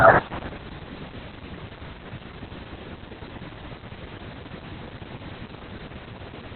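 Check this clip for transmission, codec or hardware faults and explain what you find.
One fault runs through the whole speech clip: Opus voice compression. A very low bitrate, likely around 8 kbps, pushed the SILK coder into narrowband, cutting everything above about 4.3 kHz and leaving speech muffled, hoarse and faintly robotic.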